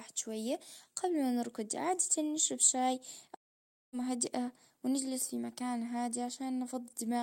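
A long network dropout runs from 3.35 to 3.95 s. The speech breaks off and the last sound is stretched into a short buzzy tail that fades away, leaving about 0.56 s of silence before the voice returns. The likely cause is a gap in packet delivery lasting nearly 0.6 s: the receiver had nothing new to play, so it briefly extended what it last held, then went quiet. The missing stretch of speech never reappears.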